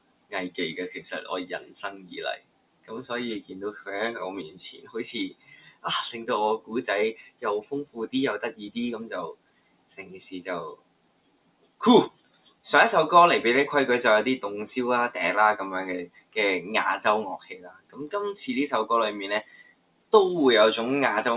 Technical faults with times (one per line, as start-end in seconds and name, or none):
0.00-21.36 noise suppressor applied to music or sounds
0.00-0.58 sound cut by the noise suppressor
1.60-12.65 sound cut by the noise suppressor
16.06-16.36 sound cut by the noise suppressor
17.38-18.00 sound cut by the noise suppressor
19.43-20.13 sound cut by the noise suppressor